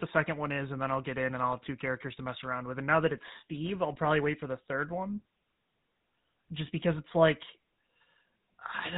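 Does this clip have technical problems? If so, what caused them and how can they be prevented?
Yes. GSM full-rate codec damage runs throughout: the speech is modelled as a vocal-tract filter driven by sparse regular pulses, giving a buzzy, gravelly roughness and nothing above 4 kHz, consistent with 13 kbps. Prevent it by recording or transmitting through a wideband path, or a modern codec such as Opus, rather than a legacy GSM phone channel.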